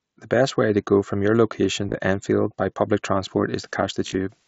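At 1.88 to 1.97 s, just after "go from your location", concealed Bluetooth headset packet loss occurs. Frames between headset and phone drop out, around 50 ms in total spread over about 90 ms. The receiver patches each gap by repeating a closely matching stretch of the recent waveform. With the longest run near 22 ms, the gaps come through as brief buzzy, held fragments with a slight warble as real sound resumes.

From 3.23 s, right after "by public", to the end at 4.47 s, the signal is reduced to low bit depth with dither. Dither randomises the rounding, which fits a 10-bit signal, so the error turns into an even, constant hiss roughly 40 dB below the sound, with no harsh distortion. The mSBC wideband headset link can be heard carrying the audio throughout.

Inside that hiss, at 4.05 to 4.15 s, the same packet loss returns with a similar spread of missing frames over about 90 ms, patched the same way and heard as another short buzzy, warbling catch.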